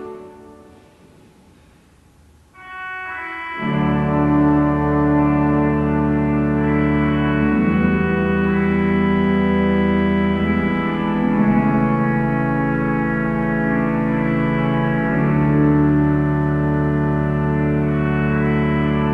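No faults to report; the audio has been through a call path, with the top end rolled off at about 12 kHz, which points to Opus at a moderate bitrate of around 40 kbps, and nothing audible from the jitter buffer.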